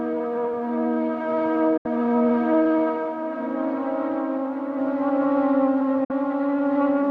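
At 1.77 to 1.86 s and again at 6.04 to 6.11 s, the music drops out in a digital broadcast dropout. The receiver mutes over about 8 ms when frames fail, losing about 72 ms and then 48 ms, which fits three and two lost frames.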